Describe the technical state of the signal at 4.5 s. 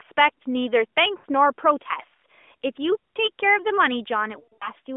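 At 4.5 s the sound falls inside a burst of lost AMR speech frames, from 4.40 to 4.70 s. Frames failed their checks. The decoder repeated its last pitch and vocal tract settings at falling gain. About 160 ms is lost. The longest gap, 80 ms, sounds smeared and fading.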